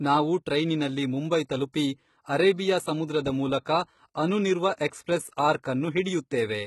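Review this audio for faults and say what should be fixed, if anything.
Across the whole speech clip the treble sounds synthetic: sibilants come out gritty and lispy, and there is nothing above about 11.8 kHz. This is likely HE-AAC compression at a very low rate, consistent with roughly 16 kbps. Only the lower band is coded; the upper band is regenerated by copying lower content upward under a coarse envelope, so its harmonics fail to align with the real ones and the damage is heavy. To prevent it, encode speech at a higher bitrate with plain AAC-LC or a speech-oriented codec such as Opus.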